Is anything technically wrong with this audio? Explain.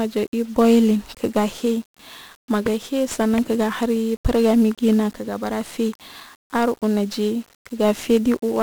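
Yes. Throughout the speech, 1-bit DFPWM compression is audible. Each sample nudges an adaptive level up or down, so broadband quantisation noise rides on everything, giving fuzz, crackle and hiss-buried treble at a rate that fits roughly 48 kbps. Unlike band-limited codec smearing, the highs are masked by noise rather than removed.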